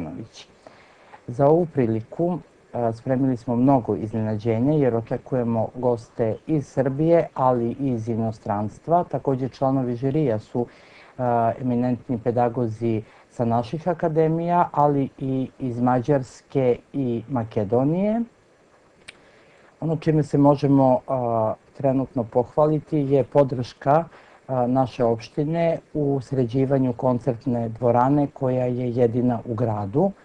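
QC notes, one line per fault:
1.46 to 1.52 s, 14.80 to 14.82 s, 23.38 to 23.41 s, 23.91 to 23.96 s and 28.01 s: hard clipping. Peaks run past the level limit, by about 2 dB at most, and are cut flat. The flat tops add high harmonics, heard as short crackles.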